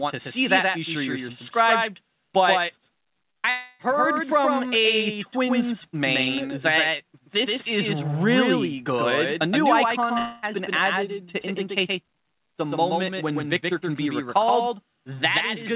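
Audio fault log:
Throughout, doubled audio track: every sound has a flat, hard-edged repeat following around 150 ms behind, about 5 dB quieter, with no reverberant tail or room colour. This is likely a second copy of the same signal mixed in out of step, perhaps captured again through a slower path.
3.32 to 3.38 s, short concealed packet loss: a brief smear of about 33 ms where the sound seems held and wobbles. Roughly 30 ms never reached the decoder, and the receiver filled the hole by extending the preceding sound before blending back.
3.38 to 3.47 s, burst of packet loss: straight after the smear, a held, dulling continuation of about 56 ms. Around 60 ms of consecutive audio was lost, so the receiver kept repeating the last sound while turning it down, and the passage resumes further on.
3.50 to 3.82 s and 10.18 to 10.45 s, long network dropout: each gap is a fading, stretched continuation of the last sound lasting about 0.29 s and 0.24 s, with no true silence, before the audio jumps forward. 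This is likely a stall in delivery that lost roughly 300 ms and 240 ms of sound, concealed throughout rather than muted. All of it passes through a narrowband call codec with nothing above 4 kHz, which fits G.711 A-law at 64 kbps.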